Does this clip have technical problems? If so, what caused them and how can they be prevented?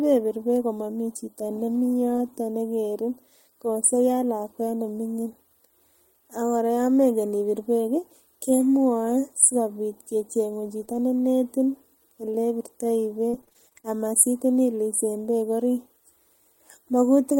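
Yes. At 10.81 s, and again from 10.89 to 10.99 s, there is a lost packet rebuilt from error correction. One packet, then three, arrived missing. The decoder played the low-bitrate copies carried in the following packets, so the sound turns rougher and noisier without a gap. A spectrogram shows grainier, less defined harmonics there. Reducing packet loss on the network, for example by using a wired connection instead of congested Wi-Fi, prevents it.

From 10.85 to 10.89 s there is a short concealed packet loss. About 20 ms never reached the decoder in time, and the receiver extended the preceding sound to cover the hole, which gives a brief smear. The waveform shows a short, overly regular stretch instead of natural variation. A larger jitter buffer and a steadier network path prevent it.

Between 13.29 and 13.85 s there is repeated packet loss, which gives a robotic sound. Eight separate gaps, the longest 38 ms, were patched by continuation, and some other lost parts were rebuilt from error correction. 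About a third of that stretch is concealed, so it sounds choppy. A spectrogram shows repeating, smeared blocks. Fixing the unstable link, or giving real-time audio priority over other traffic, prevents it.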